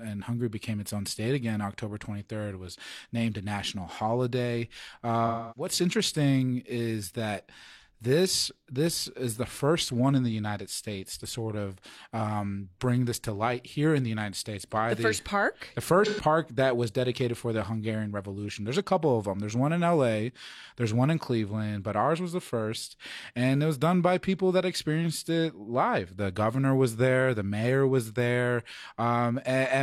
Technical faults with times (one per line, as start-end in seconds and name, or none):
5.26-5.71 AAC frame loss with concealment
16.05-16.21 AAC frame loss with concealment